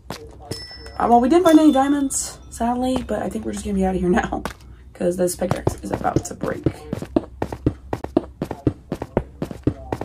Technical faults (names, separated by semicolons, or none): Bluetooth dropout